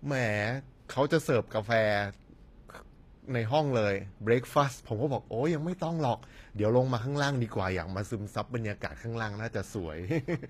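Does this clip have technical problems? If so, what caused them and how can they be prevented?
Yes. HE-AAC compression affects the speech from start to finish, and the damage is plainly audible. The likely cause is encoding at a very low bitrate, around 24 kbps to judge by the sound. The encoder keeps only the lower spectrum and synthesises the treble by copying lower bands upward under a coarse envelope, so the highs sound false. The s sounds come out gritty and lispy, because the copied harmonics don't align with the real ones. To prevent this, encode speech at a higher bitrate with plain AAC or Opus, or keep an uncompressed master.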